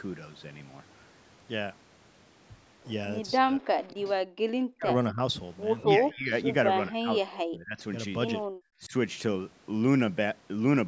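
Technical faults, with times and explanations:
3.41 to 8.93 s, speech suppressed in double talk: The voice dips and breaks up at 3.41–4.08, 4.67–5.19, 5.95–6.33, 6.73–7.79 and 8.80–8.93 s, by up to roughly 40 dB. The echo canceller likely heard both sides at once and turned the talker down with the echo.
3.78 to 3.83 s, echo leak: A faint copy of the voice slips through, delayed by 236 ms and about 20 dB down. Likely residual loudspeaker echo the canceller missed.
8.47 to 8.52 s, background gated by the echo canceller: The room sound drops by about 22 dB for a moment. The canceller clamped the microphone while the loudspeaker played, then released it.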